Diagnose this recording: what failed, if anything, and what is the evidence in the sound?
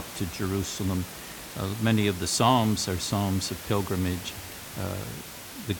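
Nothing in the signal chain has failed; the only thing audible besides the speech is the room's own background noise, sitting about 14 dB below it and belonging to the recording rather than to any stage of the system.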